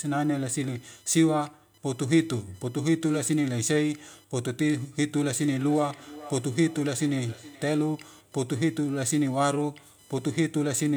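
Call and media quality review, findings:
Computer activity noise, whole clip. Faint buzz-chirp pulsing at roughly 1 kHz, around 35 dB under the speech, rising and falling with host load rather than with the talker. Probable component: shared audio ground disturbed by CPU, GPU or mouse current draw. Check grounding or isolate the interface.

Feedback echo between two devices, 5.32 to 7.96 s. Speech returns roughly every 0.4 s, thinner and more ringing each pass, loudest about 19 dB below the direct speech. Probable component: second device in the same room playing this microphone's feed. Local echo canceller cannot remove audio played by the other device. Mute one endpoint.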